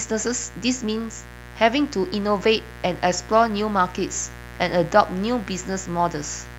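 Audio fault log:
throughout: mains buzz. A steady, raspy buzz sits under the speech for the whole clip, roughly 15 dB below it. It is locked to a 60 Hz supply: something in the chain, such as a dimmer, a rectifier or an unshielded run, admits sharp switching spikes twice per mains cycle, so the pulses repeat at 120 Hz. Because the spikes are so abrupt, their energy spreads into a dense ladder of 60 Hz harmonics reaching several kHz, which gives the buzz its edge rather than a smooth hum.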